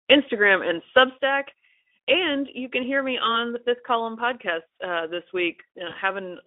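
At 1.18 s there's a sudden gain jump: the level drops by about 6 dB in one step and stays down to the end, likely a gain setting applied without a ramp. From 5.89 to 5.96 s, VoIP packet loss concealed by the speech codec shows up. About 20 ms of audio went missing, so the Speex decoder guesses from what came before, giving a brief stretched, fading sound that lingers after the audio returns.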